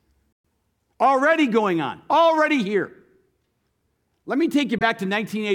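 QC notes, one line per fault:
0.33–0.45 s: Bluetooth dropout. The speech cuts to silence for about 116 ms with abrupt edges or a fade of a few milliseconds, then resumes further along rather than picking up where it stopped, so that stretch of audio is missing. This is likely the wireless link failing to deliver packets in time. The length fits about five lost packets of roughly 23 ms each.
4.78–4.83 s: Bluetooth dropout. A shorter silent gap of about 23 ms, consistent with a single lost packet. It is heard as a brief break before the speech carries on.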